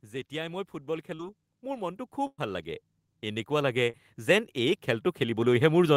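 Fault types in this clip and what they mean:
Automatic gain rising: from 0.05 s to about 5.91 s the gain control judges the input too quiet and keeps raising its level, about 19 dB in all, so the speech and the background swell together steadily across nearly the whole clip.
Short concealed packet loss: at 1.15 to 1.22 s and 3.90 to 3.96 s, about 40 ms of audio fails to arrive in time. The receiver extends the preceding sound for roughly 35 ms, heard as a brief smear or wobble before the real signal blends back in.
Burst of packet loss: at 2.27 to 2.41 s a run of about 120 ms goes missing. Concealment stretches the last sound for about 110 ms while fading it, leaving about 50 ms of silence before speech resumes further along, with that stretch gone.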